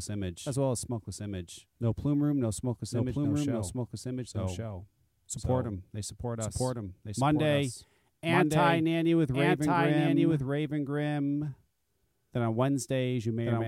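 From the start and throughout, the speech carries a doubled audio track: a second full-band copy trails about one second behind at roughly equal level, with no decay or room colour. This likely comes from a slower capture path recording the same signal again.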